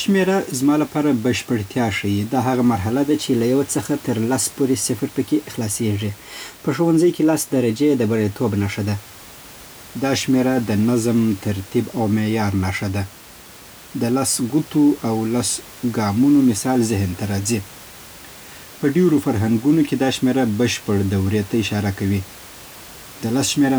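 Nothing stood out as a technical fault on listening to the speech, with only a room noise about 22 dB below it from the recording space.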